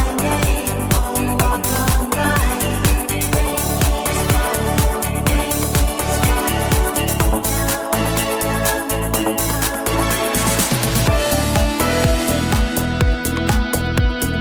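No technical faults can be heard anywhere in it.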